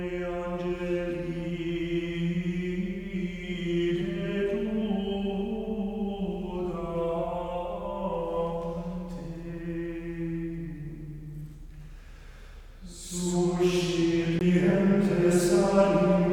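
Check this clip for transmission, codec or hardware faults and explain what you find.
One fault is present: a CD skip near the end of the clip.

CD skip, 14.39 to 14.41 s. The player's laser lost its track, through a knock or a flaw on the disc, and landed on another turn of the spiral. The output mutes very briefly, for roughly 20 ms, then resumes from a different point in the audio. It is heard as a small tick followed by an abrupt jump, so the sound does not continue where it left off.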